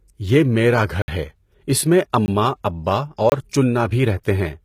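It's a short speech clip, and the treble throughout sounds synthetic, with s sounds going gritty and lispy above a hard ceiling at 14.9 kHz. That's likely HE-AAC compression, rebuilding the top end from copied lower bands, at a low bitrate somewhere around 20 kbps. There are three blocks of digital silence, each a hard dropout to silence. The longest runs from 1.02 to 1.08 s, a 60 ms hole between "یہ میرا گھر" and "ہے اس میں". Shorter ones fall at 2.26 to 2.28 s, right after "گھر ہے اس میں", and at 3.30 to 3.32 s, about 20 and 24 ms long. That's likely the program failing to fill its output buffer in time. There's also a pre-echo at 4.23 s, where a hiss of about 18 ms creeps in ahead of a sharp attack and softens it, because the codec spreads its block's noise into the quiet moment before the onset.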